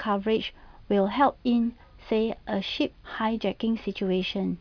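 No technical faults are audible anywhere in the recording.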